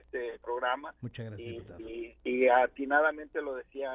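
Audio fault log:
No fault is logged for this clip.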